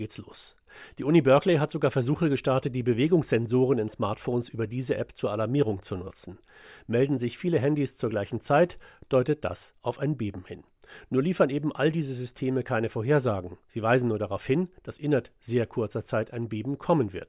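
Speech recording with no technical faults to report.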